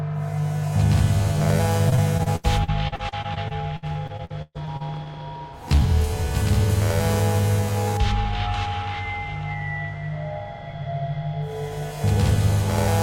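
From 1.89 to 5.07 s the sound turns choppy, with bits dropping out about twenty times. This is repeated packet loss: data kept going missing, and each hole, the longest near 131 ms, was patched by stretching the preceding sound.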